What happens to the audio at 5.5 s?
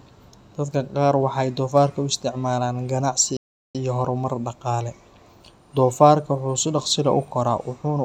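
Nothing goes wrong at 5.5 s: the speech carries on intact through that moment.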